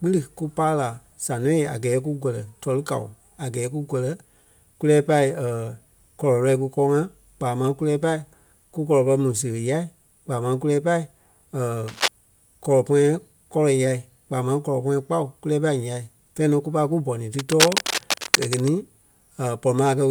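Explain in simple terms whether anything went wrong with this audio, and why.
Scratchy, rustling bursts of noise cut across the speech twice, about as loud as the talking itself: briefly from 11.88 to 12.08 s, and again for over a second from 17.39 to 18.70 s, right after "pai kú bɔni ti". This is cable scratch noise. A worn cable, plug or knob was likely being moved, so its electrical contact kept flickering between good and bad, and each flicker added a crackle on top of the sound.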